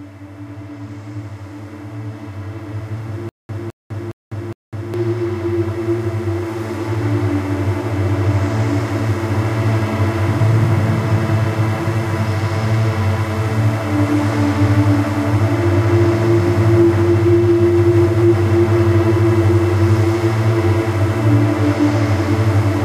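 A playback stall likely caused stutter with silent gaps from 3.29 to 4.94 s. A 211 ms burst returns four times, separated by 201 ms of digital silence.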